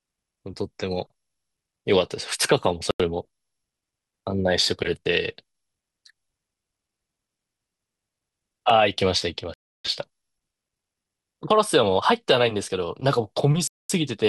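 A speech recording with two kinds of fault. The first is a repeated buffer, heard at 2.48 s and again at 8.70 s. Each time, a tiny slice of sound plays over several times in a row, four times in total at 2.48 s and three at 8.70 s. The slice lasts about 2.7 ms, which fits a 128-sample buffer. New audio arrived late, so the device reran the last block. With a block this small, the repeats come out as a brief click or buzz, not a stutter. Nothing appears to be lost. The second fault is a set of Bluetooth stalls. The sound drops to silence from 2.91 to 3.00 s, for 89 ms. It drops again from 9.54 to 9.85 s, for 307 ms, and from 13.67 to 13.90 s, for 221 ms. Each gap ends as the sound resumes. The likely cause is radio interference that delayed packets to the headphones, so their buffer emptied until the missing data came through.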